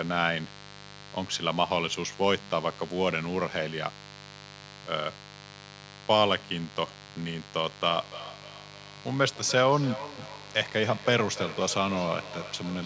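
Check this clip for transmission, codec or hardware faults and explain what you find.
Two faults are present in this speech: a mains buzz running through the whole recording, and a feedback echo between two devices that takes hold in the final few seconds.

Mains buzz is present from start to finish. Something in the power or grounding path, such as a dimmer, a rectifier or an unshielded cable, is injecting sharp switching spikes locked to the 50 Hz supply, twice per cycle. Because the spikes are so abrupt, they carry a long series of harmonics of 50 Hz well up into the kilohertz range, not just a low hum. The result is a steady, raspy buzz sitting roughly 20 dB below the speech.

The feedback echo between two devices starts at 7.88 s and lasts to the end of the clip. Two devices in the same room are joined to one call, so one loudspeaker replays what the other microphone sent, and that microphone picks it up again. 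Neither echo canceller can remove sound played by the other device. Each phrase comes back at intervals of roughly a third of a second, thinner and more ringing, with the loudest repeat about 14 dB below the speech.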